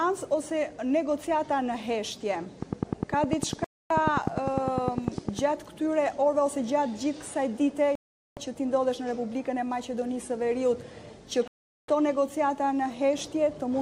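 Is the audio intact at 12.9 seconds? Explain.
Yes, the audio at 12.9 seconds is intact, with no dropout, click, distortion or other fault at that moment.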